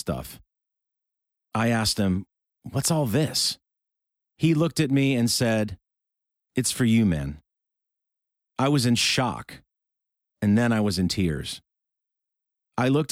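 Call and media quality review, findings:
No faults found in the speech clip; all capture, processing and playback paths behave as expected on listening.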